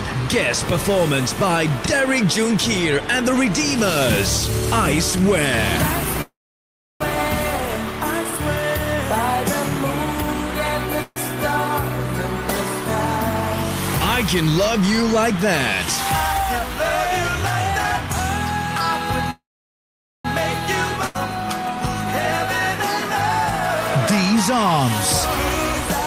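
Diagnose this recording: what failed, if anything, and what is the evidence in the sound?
Call audio freeze, at 6.21–7.02 s, 11.02–11.18 s and 19.30–20.27 s, sits in the network and jitter-buffer stage. Each time the sound stalls and the last fragment is drawn out into a fading buzz or hiss. In the first and third, most of the stretch is silent: about 0.68 s of 0.79 s, then 0.84 s of 0.94 s. The second lasts only 0.14 s. Nothing is lost, and the sound resumes where it stopped, later than before. The likely cause is delayed packets draining the buffer.

Jitter buffer speed-up, 14.42–15.46 s, is a receiver-side buffer correction. The sound runs about 5% fast with pitch unchanged, giving a slightly hurried feel over that second. Roughly 50 ms is trimmed away as many tiny pitch-period cuts, pulling the accumulated delay back down toward the buffer's target rather than letting the backlog persist.

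Skip ahead, 21.07–21.16 s, is a network or buffer-overflow drop. Playback jumps forward with only a brief 79 ms bridge. Roughly a second of sound is simply gone, and the material either side is spliced almost directly. Discarding that stretch while later audio was already queued cuts the accumulated delay by about a second.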